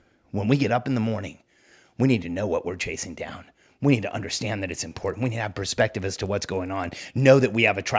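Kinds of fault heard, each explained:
Resampler restarted on every block: each 20 ms block was converted from 24 kHz to 16 kHz separately, so edge errors form a 50 Hz buzz after "need to understand".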